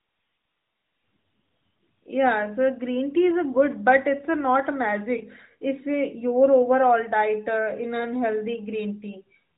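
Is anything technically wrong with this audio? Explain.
Yes. There are lost AMR speech frames, single dropouts at 5.18 to 5.23 s and 8.00 to 8.08 s. Each sounds like one missing 20 ms frame. The decoder filled the gap by repeating the last good pitch and vocal-tract settings at reduced gain, so each one is a short dip or warble. On a waveform the envelope sags briefly. On the spectrogram the harmonics smear flat for a moment under the narrowband codec's 4 kHz ceiling.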